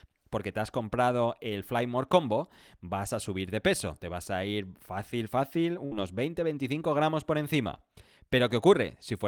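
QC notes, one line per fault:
5.85–5.93 s, burst of packet loss: several consecutive packets went missing right after "a ir fácil fácil", so the receiver stretched the last received sound across about 58 ms, fading it out, then resumed with roughly 60 ms of speech skipped entirely.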